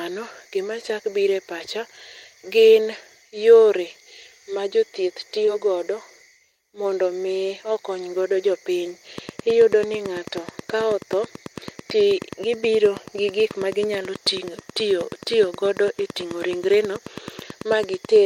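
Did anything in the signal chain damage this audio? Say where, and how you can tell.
Yes. At 5.45 s, just after "ma jothieth", a brief smear reveals short concealed packet loss at the network stage: about 20 ms went missing, and the decoder filled the gap by extending the preceding sound.

From 9.18 s, after "okony godo jopiny", to the end, a train of clicks ticks regularly at 9.25 per second, louder than the speech, likely from electrical interference in the analogue wiring or interface.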